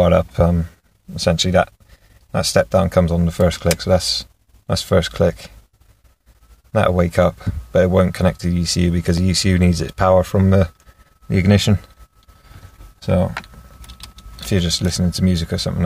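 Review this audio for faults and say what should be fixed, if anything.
At 9.18 s there is a single brief tick or dip, too brief to register as a gap. It is a block of digital silence lasting about 0.73 ms: the sound drops straight to silence and jumps back with no fade. A hole this short fits a 32-sample block that the program failed to fill in time, or that a calculation returned as invalid values and then zeroed. To prevent it, give the processing thread enough buffer headroom so every block is written before output, and guard against invalid values instead of muting them.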